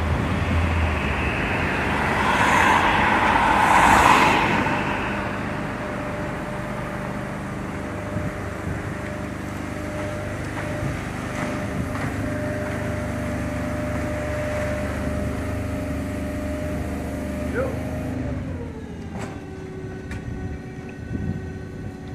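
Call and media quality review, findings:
No technical faults were found anywhere in the signal, so no symptoms, times or components are listed for this review.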